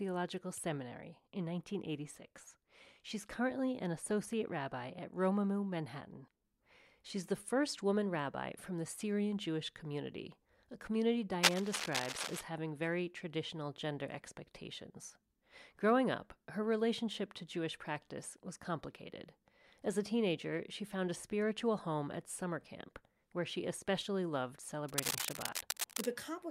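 Two bursts of rough scratching and rustling cut across the speech: from 11.43 to 12.44 s, roughly as loud as the speech itself, and again from 24.88 to 26.06 s, a little quieter. Both are cable scratch noise, likely from a worn cable, connector or control being moved. Its contact resistance jumps about rapidly, which lays dense, uneven noise over the speech for about a second each time.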